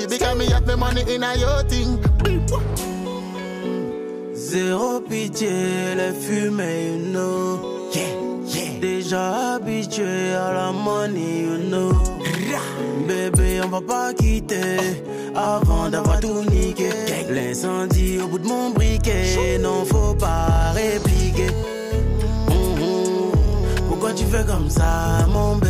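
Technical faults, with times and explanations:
13.35–13.37 s, corrupt frame decoded: a brief chirp or burst of misplaced noise, because a couple of compressed frames with damaged bits were decoded and played anyway.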